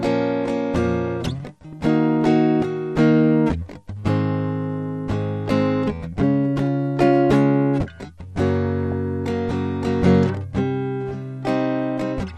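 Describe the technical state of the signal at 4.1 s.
At 4.1 s the music carries MP2 compression damage, present across the whole clip rather than at that instant alone. The sound is dull and lacks top end, with a gurgling, granular texture as upper bands drop in and out. This likely comes from MPEG Layer II coding at a low rate, around 80 kbps, where too few bits leave high sub-bands switched off and the rest coarsely quantised.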